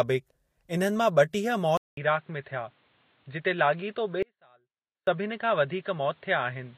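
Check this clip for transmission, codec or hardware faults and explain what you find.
Two faults are present in this speech clip.

At 1.77 s the sound goes silent for about 200 ms, then returns duller, a few decibels quieter, over a new low noise floor with nothing above 4.4 kHz. This is likely an input switched to a poorer device. The spectrogram shows a hard ceiling from there to the end.

From 4.23 to 5.07 s, 845 ms of signal drops out abruptly, leaving only a faint residue far below normal level. This is likely an audio dropout to a faint residue, with the path still live. The waveform shows a sudden near-flat stretch with squared edges, not a taper.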